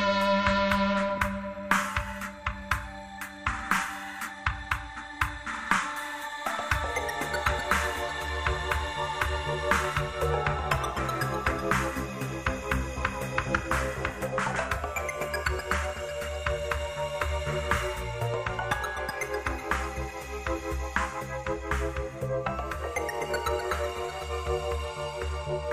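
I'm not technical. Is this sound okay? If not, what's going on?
Yes, nothing stood out as a problem when listening to this sound.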